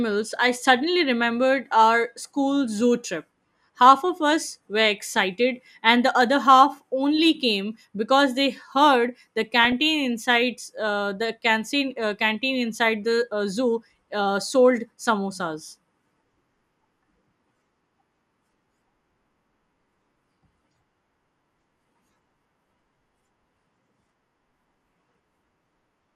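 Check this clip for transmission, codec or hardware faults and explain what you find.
One transmission fault is present, DAB burbling, from 9.64 to 9.72 s. Under weak reception, bit errors at around 0.2 percent slipped past the error correction into the MP2 data, corrupting samples so single sub-bands carried short blips of noise. The 86 ms burst hit four frames. In the speech it comes across as a short patch of noise blips in single sub-bands laid over the programme.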